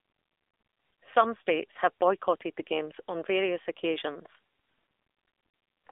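From start to end, the speech carries AMR narrowband mobile codec damage. The band is squeezed to roughly 300 Hz to 3.6 kHz. A vocal-tract model rebuilds each 20 ms frame from sparse pulses. The buzzy, synthetic edge fits a low rate near 7.4 kbps.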